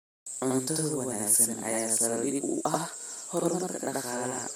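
A speech recording with a channel delay doubling from 0.4 s to the end: one channel runs about 85 ms late, which fits a 4096-sample buffer, and once the two are folded to mono you hear every syllable twice, as a same-level slap echo trailing the original.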